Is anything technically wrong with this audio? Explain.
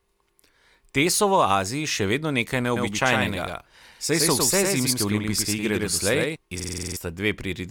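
Yes, two faults. A doubled audio track runs from 2.76 to 6.36 s, just after "še vedno nekaj". A full-band copy trails about a tenth of a second behind at about 5 dB lower, likely from a second, slower capture path. It gives a dry, abrupt echo.

A system hang loop runs from 6.60 to 6.97 s. The system froze while the hardware kept replaying one 46.44 ms buffer, which fits a 2048-sample buffer. It repeats 8 times at 21.5 Hz, producing a rapid stutter and losing roughly 0.4 s of audio.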